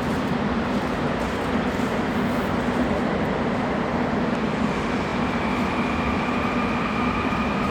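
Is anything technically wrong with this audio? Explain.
Yes. At 1.74 to 1.79 s and again at 5.09 to 5.11 s the sound stutters, replaying a short slice. These are repeated frames: compressed blocks of 46.4 ms and then 23.2 ms were decoded twice, lengthening the audio by those amounts.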